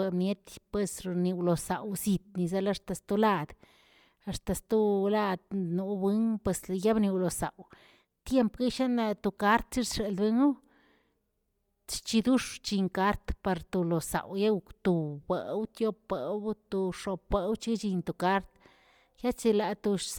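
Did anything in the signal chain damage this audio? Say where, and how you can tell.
Yes, at the codec stage: plainly audible Bluetooth LC3 compression throughout, with breathy, grainy noise-filled highs, likely from LC3 at around 48 kbps, unlike simple band-limiting, which leaves the highs clean and merely dull.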